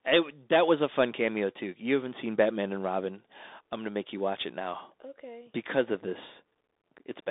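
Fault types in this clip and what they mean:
Bluetooth CVSD headset codec: narrow, scratchy speech with granular hiss and nothing above 3.8 kHz, from one-bit delta coding at 64 kbps.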